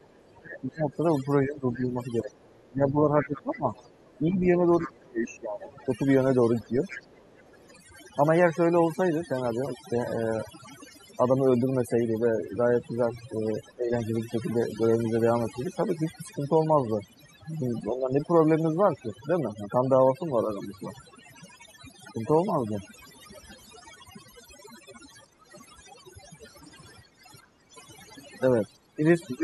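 Overdone noise removal runs through the whole clip: the background drops and breaks up into twinkling specks.

From 0.04 to 7.75 s, the other side's voice leaks through, about 20 dB below the talker. It is a second voice, likely loudspeaker echo the canceller missed, not room reverberation.

Between 0.39 and 6.76 s, speech is suppressed in double talk, with the talker dipping by roughly 20 dB for about four seconds in total. It happens again at 13.73 to 13.95 s, at 17.9 to 18.15 s, and from 28.72 s to the end. Unlike noise-removal thinning, the losses likely come only while both sides overlap.

At 7.1 to 7.71 s the background is gated by the echo canceller, dropping about 10 dB. Between 25.27 and 27.72 s it drops about 14 dB, for roughly 0.7 s in total. Here the room sound itself ducks and returns, not the voice.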